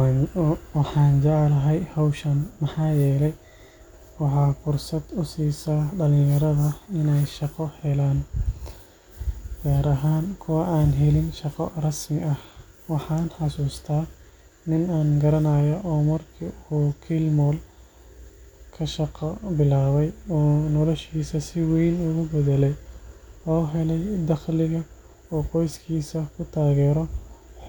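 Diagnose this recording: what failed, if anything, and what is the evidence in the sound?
Nothing failed in this recording, and the sound gives no evidence of a fault at any stage.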